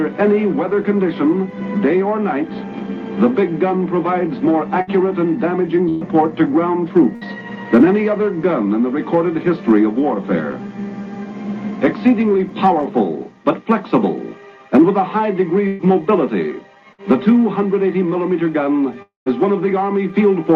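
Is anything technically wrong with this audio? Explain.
Yes. There are two kinds of network fault.

Burst of packet loss at 4.81, 5.89, 7.15, 15.67 and 16.93 s. Each time, a short run of audio failed to arrive in time to be played. The receiver covered the hole by extending the last sound and fading it down. This fill lasts about 55 to 60 ms at 4.81, 7.15 and 16.93 s, and about 120 ms at 5.89 and 15.67 s. It is heard as a brief smeared buzz or hiss. Playback then resumes with that stretch missing.

Long network dropout at 19.02 to 19.29 s. About 240 ms of audio is lost. The last sound is stretched and faded for a moment, then about 140 ms of silence follows before the audio returns, skipping ahead past the gap. The cause is likely a stall in the network connection rather than a few scattered lost packets.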